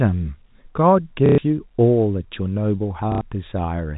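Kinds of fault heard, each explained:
Packet loss with last packet repeated: at 1.26 to 1.38 s and 3.12 to 3.21 s, lost stretches of 120 ms and 90 ms are filled by replaying the last received packet, giving a robotic stutter and a buzz near 33 Hz, which fits 30 ms packets.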